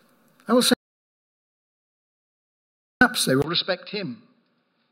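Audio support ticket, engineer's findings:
Audio dropout to silence, 0.74 to 3.01 s: about 2.3 s of silence, with no room tone, then abrupt return. The likely cause is the input link dropping while the recorder kept writing silence. Content in the gap is lost.

Input switched to a poorer device, 3.42 s to 4.91 s: a 20 ms gap, then a dull, narrowband tone with nothing above 5.2 kHz, a level around 10 dB lower, and a new noise floor roughly 55 dB down. The likely cause is a mid-take fallback to a lesser microphone or a headset call profile.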